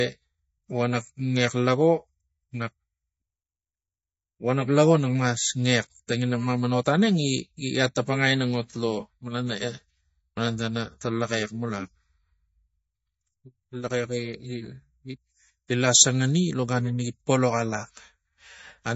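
MP3 compression throughout: nothing above 7.6 kHz and a plainly audible watery swirl, likely an encoder starved of bits, which fits about 32 kbps.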